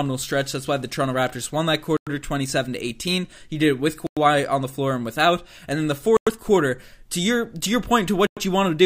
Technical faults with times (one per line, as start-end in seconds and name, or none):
1.97-2.07 gap between chunks
4.07-4.17 gap between chunks
6.17-6.27 gap between chunks
8.27-8.37 gap between chunks